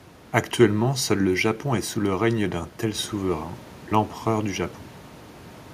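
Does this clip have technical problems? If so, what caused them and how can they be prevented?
No technical problems.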